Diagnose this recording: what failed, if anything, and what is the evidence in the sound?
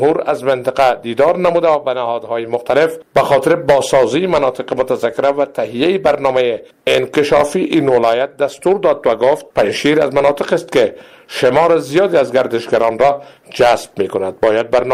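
Nothing stood out on listening that would point to a failure at any stage of the chain.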